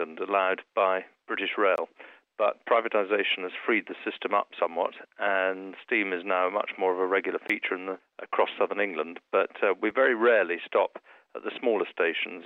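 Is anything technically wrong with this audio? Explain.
Yes. Blocks of digital silence appear at 1.76 s and 7.48 s (20 ms each) and at 9.91 s (5 ms). Samples drop abruptly to silence and back with no fade. The longer gaps sound like short holes and the shortest like a tick. A waveform shows flat silent stretches, and a spectrogram shows empty slots edged by thin vertical broadband lines.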